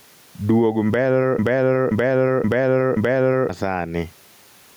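Right from the start there's gain pumping across the whole speech clip. The level keeps lurching by something like 15 dB. Loud and quiet stretches end up squeezed close together, so it sounds flattened and breathing. The likely cause is input gain cranked way too high, with a fast limiter or compressor clamping down on each loud sound.

Then at 1.39 s a broken-record loop kicks in and runs to 3.49 s. A chunk of about 0.53 s plays four times back to back, each repeat identical, so the speech turns into a stuck, stuttering loop. Whatever should have been heard in those two seconds is simply gone. It's likely the player, encoder or stream stalled and kept resending the last fragment it had buffered until it caught up again.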